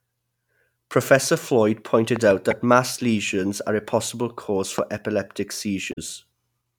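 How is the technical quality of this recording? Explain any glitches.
The recording has two kinds of fault, each occurring twice.

Loud pops, at 2.16 to 2.33 s (two in quick succession) and 4.78 to 4.81 s (one): a voltage step or pulse, likely from a plug, switch, static or driver glitch, entered the signal chain. The speech carries on beneath sharp thumps peaking roughly 10 dB and 15 dB above it.

Damaged data in the compressed stream, at 2.50 to 2.53 s and 5.89 to 5.98 s: corrupted bytes made the decoder misread frames and lose sync while hunting for the next valid header. The result is a brief chirp or blip.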